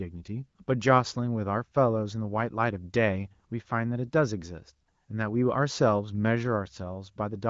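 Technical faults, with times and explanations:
No technical faults to list, so there are no times or explanations to give.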